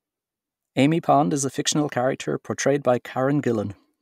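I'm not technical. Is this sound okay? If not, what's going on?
Yes, the speech recording is technically sound, with nothing in the signal itself that stands out as a problem.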